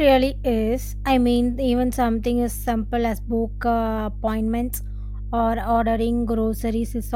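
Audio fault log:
Throughout, mains hum: a steady 50 Hz tone sits only about 10 dB below the speech, power-line current coupled in by a ground loop or transformer.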